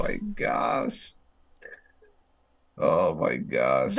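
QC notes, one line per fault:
No faults heard in this speech recording.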